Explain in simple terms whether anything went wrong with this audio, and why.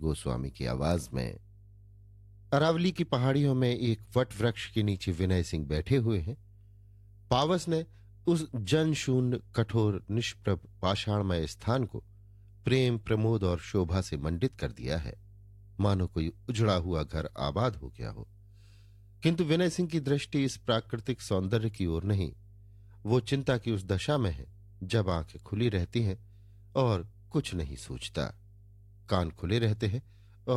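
Mains hum runs through the entire speech recording: a steady low 50 Hz drone beneath the voice, likely picked up from a ground loop or nearby transformer.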